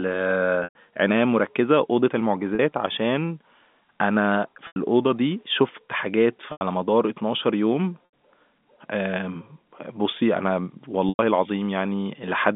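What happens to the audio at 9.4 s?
Nothing goes wrong at 9.4 s: the speech carries on intact through the narrow telephone band of the G.711 coding, with no dropout, click or distortion at that point.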